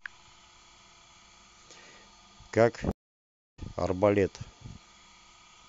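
At about 2.91 s the speech cuts out completely, and it comes back at 3.59 s after roughly 0.64 s of dead air. That's a stream reconnect: the connection dropped, the player sat silent while it re-established the link, then spun up a fresh decoder partway through the stream. When the audio picks up again it isn't where it left off. It jumps ahead by something like 0.7 s, so a chunk of the speech is simply missing across the gap.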